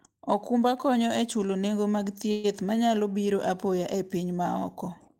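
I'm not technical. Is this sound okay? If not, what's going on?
No. At about 2.31 s the speech briefly stalls: the last bit of sound is stretched into a short buzzy hold that fades, lasting about an eighth of a second, until 2.46 s, when the talking picks up exactly where it left off. This is a call audio freeze. The likely cause is that the data carrying the call got held up in transit, so the receiving end padded the gap with leftover sound. Nothing was lost, but the rest of the speech now runs slightly later.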